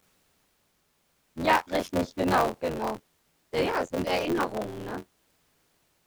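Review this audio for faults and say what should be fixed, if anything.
Buffer tearing runs through the whole speech clip as a rattling, robotic buzz at about 86.1 Hz that is present only while there is speech. The writer and the reader of the playback ring buffer have drifted so that they cross inside every period, which fits a 512-sample buffer. Roughly two fifths of each period replays audio from about 20 ms earlier. On a waveform, hard steps appear at both edges of each stale segment, repeating every 11.6 ms. A spectrogram shows vertical lines at that spacing, plus a comb of harmonics 86 Hz apart laid over the speech. To prevent it, keep the write pointer a safe margin ahead of the hardware read position and resynchronise the buffer after any underrun or clock drift.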